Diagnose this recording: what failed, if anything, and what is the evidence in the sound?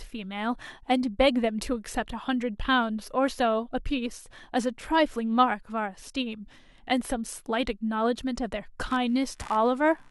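The analogue wiring failed, with computer activity noise on the shared ground. From 8.9 s to the end at 10.1 s, a chirping buzz pulses around 70 times a second, roughly 25 dB below the speech. It follows machine load, not the sound.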